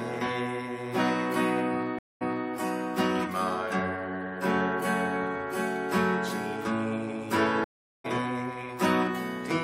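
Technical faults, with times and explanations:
1.99–2.49 s, stream reconnect: the connection broke and a fresh decoder restarted mid-stream; after 0.22 s of silence the sound resumes 0.28 s earlier, repeating a short stretch.
7.64–8.06 s, stream reconnect: another dropped connection and decoder restart; 0.4 s of silence, then the sound picks up roughly 0.3 s later, skipping material.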